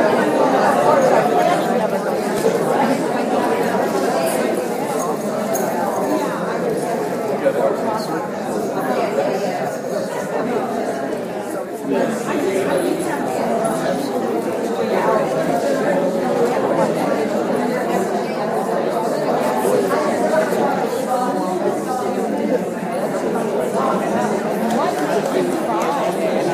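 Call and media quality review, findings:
No audible faults found.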